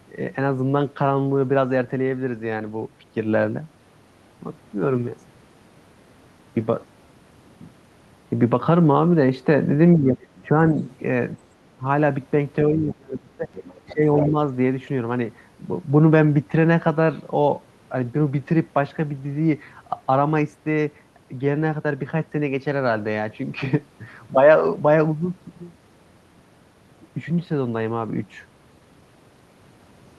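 Between 9.97 and 10.78 s the speech dips in patches, by roughly 10 dB at worst, for a total of around 400 ms. This is speech suppressed in double talk: the echo canceller most likely could not tell the talker from the loudspeaker echo while both sides spoke, so it pulled everything down. Inside that stretch, from 10.36 to 10.47 s, a faint second voice appears about 30 dB under the speech. This is the other side's voice leaking through, likely residual loudspeaker echo that the canceller failed to remove from the microphone. The leak returns from 10.8 to 10.96 s, louder at about 20 dB below. A brief dip of about 15 dB follows at 11.77 to 11.85 s. The deepest suppression runs from 12.68 to 13.49 s, cutting the speech by around 25 dB over roughly 700 ms. The leaking voice then comes through most strongly, about 10 dB under the speech, from 13.52 to 14.28 s. It overlaps a final suppression of about 15 dB between 13.93 and 14.36 s.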